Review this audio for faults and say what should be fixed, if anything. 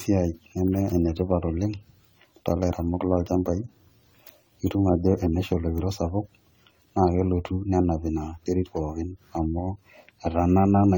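Generation loss runs through the whole clip. The speech sounds swirly, smeared and hollow, and consonant attacks blur. This likely comes from around ten rounds of lossy re-encoding, each quantising on a shifted frame grid, so the noise and spectral holes accumulate. The damage fits a 64 kbit/s AAC-LC chain. Keep a lossless master and encode only once, at the final step.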